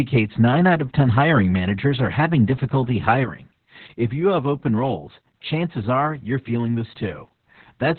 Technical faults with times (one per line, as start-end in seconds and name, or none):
0.00-7.98 Opus voice compression
3.24-7.98 sudden gain jump